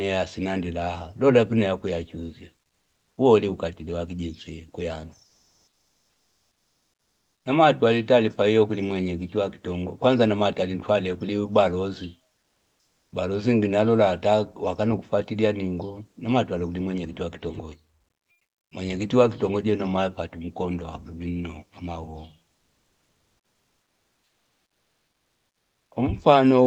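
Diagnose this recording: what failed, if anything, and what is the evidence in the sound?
Comfort noise replaced the background in the speech pauses at 2.67–3.17, 5.27–7.45, 12.39–13.11, 18.31–18.71 and 22.57–25.91 s. The room tone turns steady and featureless, shifting by up to about 5 dB. The stage is call processing, likely Opus discontinuous transmission. The receiver synthesises noise while the sender is silent.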